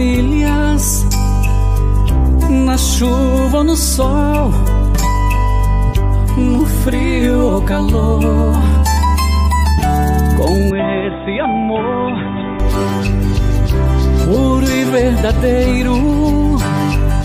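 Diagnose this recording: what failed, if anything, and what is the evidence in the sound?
Input switched to a poorer device, 10.71 to 12.60 s: with no gap, the sound turns dull and a few decibels quieter, loses everything above 3.8 kHz, and carries a new low background noise. The likely cause is the driver rerouting capture to a narrower-band microphone or headset profile, then back.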